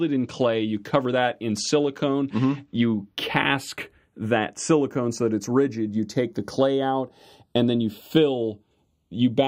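Throughout, the channels drift apart: separate clocks, tens of parts per million adrift, slide the delay to a fraction of a millisecond, sweeping comb notches one way only, unlike a flanger's cycling.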